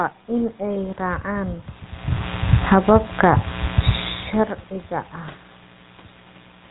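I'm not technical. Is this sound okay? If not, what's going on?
No, not quite. The whole clip has been squeezed through the old GSM full-rate codec, the kind early mobile phones used. It rebuilds the voice from a rough model, so it sounds buzzy and gravelly, and everything above about 3.8 kHz is gone, which makes it thin.

There's also some automatic gain falling between 2.57 and 3.2 seconds. The volume control decided things were too loud or too noisy and turned itself down, so the voice and the background sink together instead of holding steady.

Right on top of that, from 2.89 to 3.71 seconds, the automatic gain rising kicks in. The same control found things too quiet and turns back up, so everything swells again, background included, and that part of the clip seems to dip and then bloom.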